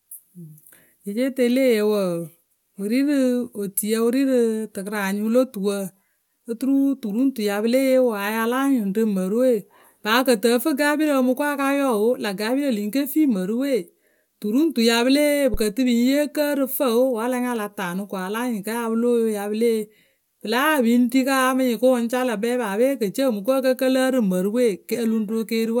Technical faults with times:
15.54-15.67 phantom power thump

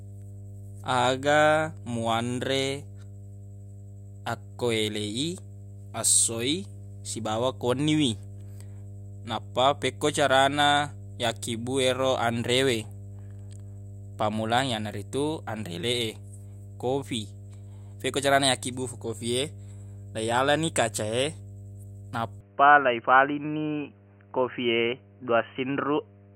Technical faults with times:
0.00-26.35 mains hum
22.41-26.35 input switched to a poorer device

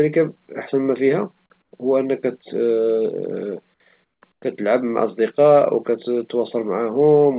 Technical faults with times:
1.62-1.72 comfort noise in place of the background
4.04-4.42 comfort noise in place of the background

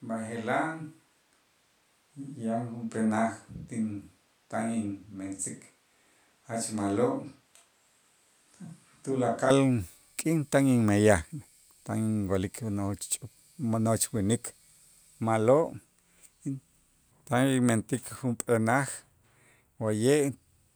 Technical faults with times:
0.00-9.50 switch to a distant microphone

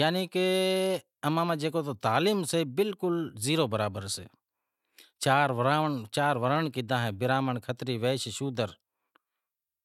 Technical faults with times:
none

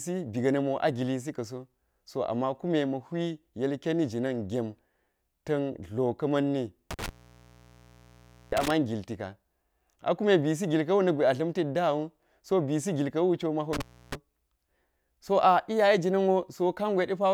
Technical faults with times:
6.91-8.71 intermittent contact
13.73-14.15 intermittent contact

